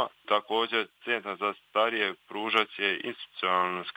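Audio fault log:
No fault is found in this audio.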